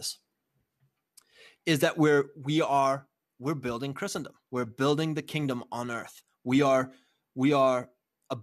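No dropouts, clicks, distortion or level jumps turn up anywhere in the recording.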